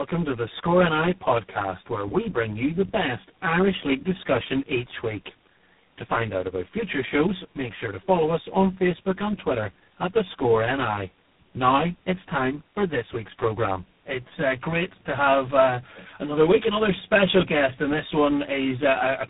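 From start to finish the speech sounds hollow and phasey, with fixed notches spread evenly across the spectrum. This is channel delay (comb filtering): one channel runs about 10 ms late, and summing to mono cancels shared content from around 50 Hz, repeating every 100 Hz or so.

Throughout, the speech is also rough, muffled and warbly, with nothing above 3.8 kHz. This points to tandem speech coding: the call passed through iLBC, GSM full rate and finally G.726 at 24 kbit/s, with G.711 links between them, each coder degrading the last one's output.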